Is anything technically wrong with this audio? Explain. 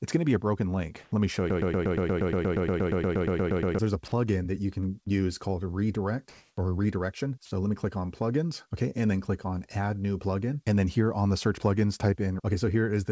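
Yes. The clip has four kinds of fault, and nothing is heard above 8 kHz, which points to a wideband call codec such as G.722.

From 1.04 to 1.12 s, and again from 6.29 to 6.57 s, comfort noise stands in for the background. Smoother synthetic noise replaces the real ambience. It is about 1 dB quieter the first time and about 3 dB louder the second. Discontinuous transmission is the likely cause.

From 1.50 to 3.79 s, a broken-record loop repeats a 118 ms fragment 19 times, back to back. A stalled stream likely resent its last piece. The audio that belonged there is lost.

From 5.04 to 5.11 s, a short concealed packet loss covers a gap of about 20 ms. The decoder extended the preceding sound and blended back, leaving a brief smear.

From 7.45 to 7.51 s, a sound is dropped by the voice detector. About 40 ms of sound gives way to steady noise, likely because the detector mistook it for background.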